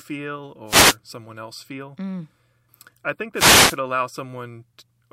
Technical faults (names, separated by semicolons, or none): wireless microphone noise hit